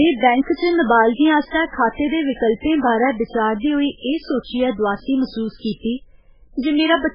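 From start to finish the speech sounds watery and swirly, with metallic chirps on s sounds, smeared onsets and nothing above 5.2 kHz. This is heavy damage, likely from MP3 compression at a starved bitrate near 8 kbps, where weak frequency lines drop in and out.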